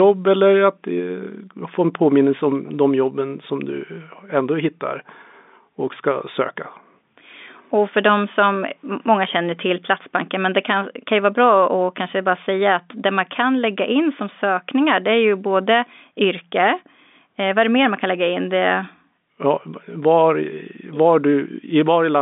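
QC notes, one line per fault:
Nothing stood out on listening to this telephone-band speech recording.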